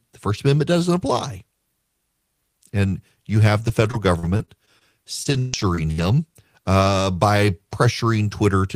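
Repeated packet loss (robotic sound) occurs from 3.67 to 4.83 s and again from 5.23 to 6.09 s. Each missing piece of speech is patched by stretching the preceding sound, about 140 ms and then 240 ms in total, leaving choppy, robotic speech.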